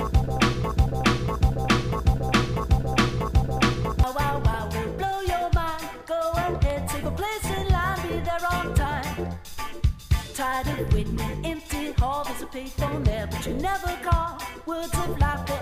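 The audio opens with a broken-record loop already under way, lasting until about 4.04 s. A 0.64 s fragment repeats back to back, five times over. The likely cause is a stalled player, encoder or stream resending its last held piece. The audio meant for that stretch is lost.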